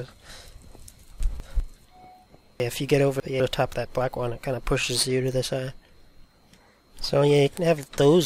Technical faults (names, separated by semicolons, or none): chunks out of order